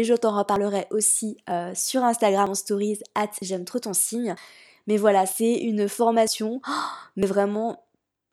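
A processor likely working in roughly one-second chunks drops a sliver of speech at each handover, audio missing between chunks, so about 50 ms vanishes and the sides butt together in an abrupt skip: at 0.56 s after "je t'en", 1.51, 2.47 s before "en stories hâte j'aime", 3.42 s between "en stories hâte" and "j'aime trop ton signe", 4.37, 5.32, 6.27 and 7.23 s.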